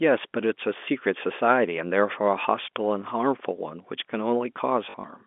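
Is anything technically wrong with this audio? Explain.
Yes. Between 4.9 and 5.04 s there is packet loss with the last packet repeated. About 60 ms of audio is missing, scattered over a short stretch, with the longest gap 40 ms, which fits 20 ms packets. Instead of going silent, the receiver replays the previous packet. Those joins ignore the pitch cycle, so they give a brief robotic, buzzy stutter at roughly 50 Hz. A plain dropout would leave silence instead of this repeated, buzzing texture. The narrow telephone band of the G.711 line carries through the event.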